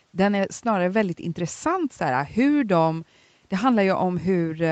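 No faults heard in this speech: the top end stops at 8 kHz as expected of a wideband Opus call path with its usual coding texture, and the microphone high-pass only trims the lowest bass.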